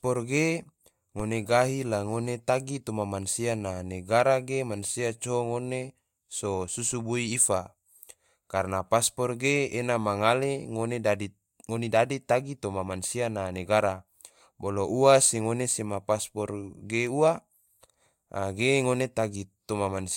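Dropped samples at 0.37 s: a single sharp click cuts through the speech, a thin vertical line across the spectrum. The likely cause is a fraction of a millisecond of audio missing from the stream, so the waveform leaps straight to a later value.

DC step at 1.20 s: the waveform's zero line jumps abruptly to a new offset, heard as a low thump or click while the speech carries on unchanged. The offset then decays away at a rate matching a 20 Hz high-pass filter.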